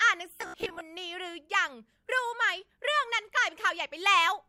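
From 0.36 s to 0.81 s the speech collapses into robotic sound from repeated short buffers: a stiff, metallic buzz pinned at about 67 Hz that only loosely tracks the syllables. The likely cause is audio arriving too seldom, so playback loops a roughly 15 ms slice, with about half the passage being repeats standing in for skipped material.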